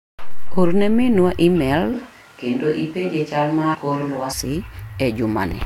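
Right after "minwa imel", from 1.95 to 4.31 s, the speech turns suddenly roomy, hollow and thin at much the same level, with faint room noise about 30 dB below it. The close signal was likely lost, causing a switch to a distant microphone.

From 3.73 to 3.76 s, the audio jumps ahead by about a tenth of a second. Compressed frames were skipped, roughly four, missing or rejected by the decoder.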